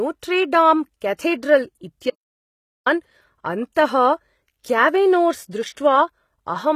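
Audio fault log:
throughout, HE-AAC compression: the damage is plainly audible. The treble looks likely to be rebuilt by band replication rather than coded, so s sounds go gritty and lispy, with nothing above 14.9 kHz. That points to a low bitrate, somewhere near 20 kbps.
2.10 to 2.86 s, audio dropout to silence: the speech cuts off and comes back about 0.76 s later. The gap is dead silent with no room tone, so the input was likely lost while recording carried on, and whatever was said there is gone.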